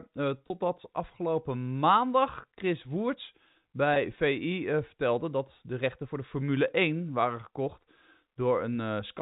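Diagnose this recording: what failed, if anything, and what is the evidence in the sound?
Packet loss with pitch repetition occurs at 0.48–0.50 s, just before "afgelopen maandag", and again at 3.94–3.96 s. This is a network-stage fault. Each 20 ms gap, consistent with one lost packet, was bridged by repeating the last pitch period, so the speech briefly holds on a slightly buzzy tone within the 4 kHz G.711 telephone band.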